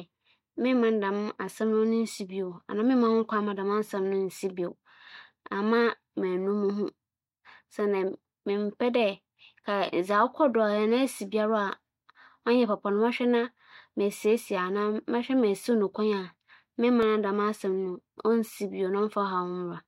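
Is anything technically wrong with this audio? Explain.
Yes. At 17.03 s the speech drops for about 1.45 ms into a block of digital silence, which fits a 64-sample buffer left unfilled and zeroed. The abrupt cut and return produce a brief tick. The waveform shows a short flat line at zero with sharp edges; the spectrogram shows a thin vertical broadband streak.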